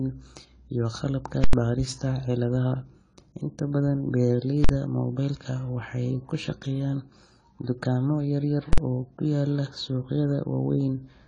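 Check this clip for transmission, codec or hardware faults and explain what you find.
Two faults are present: a band-limited, codec-damaged sound throughout and three full-scale bursts.

Throughout the speech, nothing is heard above 10 kHz, and the remaining sound is dull and smeared with a warbling, fizzy texture on sibilants. The likely cause is AAC compression at a low bitrate, around 24 kbps, with quantisation too coarse to hold the upper spectrum.

Invalid numbers at full scale occur at 1.44 to 1.53 s, right after "iyo qalabka", then at 4.64 to 4.69 s and 8.73 to 8.78 s. A processing block produced infinite or invalid values that were forced to maximum output. These are heard as very loud pops at the edges with no sound between, or as a single bang where the block is short. The first lasts about 93 ms, which fits a 4096-sample block, and the others about 46 ms, fitting 2048 samples.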